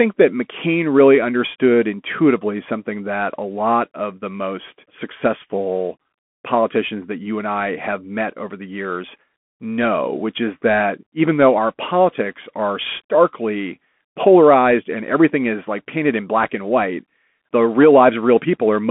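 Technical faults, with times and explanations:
Throughout, Bluetooth CVSD headset codec: the speech sits in a narrow telephone band of roughly 200 Hz to 3.4 kHz, with nothing above 3.7 kHz, which fits the 64 kbps one-bit delta coding a headset link uses. The adaptive step can't keep up with loud, steep sounds, so s sounds turn scratchy and a granular hiss runs underneath. On a spectrogram the energy stops at a hard ceiling near 3.7 kHz. The waveform shows slanted, staircase-like slopes on sharp peaks.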